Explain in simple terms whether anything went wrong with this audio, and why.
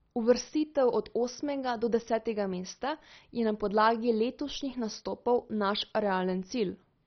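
MP2 compression damage runs through the whole speech clip. It sounds dull, with nothing above 6.1 kHz, and has a gurgling, grainy texture. The likely cause is heavy MP2 encoding. It splits the sound into bands and, short of data, drops the highest ones and crudely rounds the rest.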